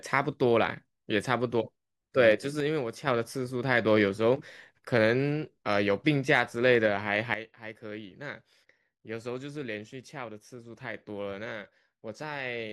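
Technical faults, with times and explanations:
2.60 to 3.07 s and 7.34 s to the end, sudden gain jump: the speech and its background noise drop together in a single step, by about 6 dB in the first span, then by about 12 dB from 7.34 s onward. The first drop recovers just as abruptly at 3.07 s. The likely cause is a digital gain change applied from one sample to the next with no ramp. On the waveform the envelope falls in hard vertical steps. On a spectrogram all frequencies dim at once along a sharp vertical edge.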